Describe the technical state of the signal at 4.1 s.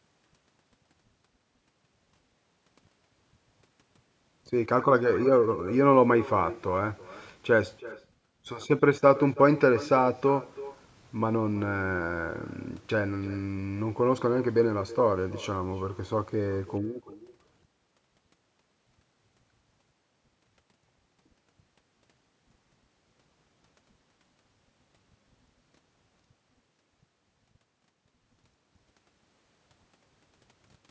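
At 4.1 s the far end is playing the call over a loudspeaker, its microphone picks that playback up again, and no echo canceller removes it. This echo with no canceller runs through the whole recording, not just this moment. The speech returns after the network round trip, roughly a third of a second later and about 18 dB quieter, as a thin shadow trailing each phrase. The band stops at 8 kHz, as the call microphone processing allows.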